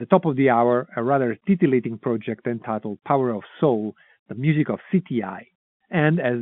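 No technical faults are present in this telephone speech recording, whose 150 Hz to 3.5 kHz band is simply the expected footprint of G.711 coding.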